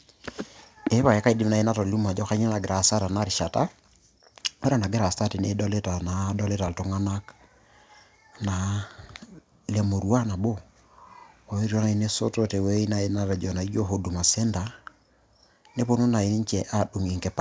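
No technical faults are audible.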